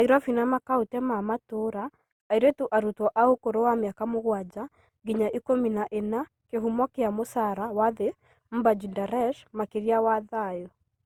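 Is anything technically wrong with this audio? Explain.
Yes. Throughout the speech, generation loss: a swirly, hollow smear with blurred consonant attacks, likely from about five Opus re-encodes near 64 kbit/s, worse than one pass would sound.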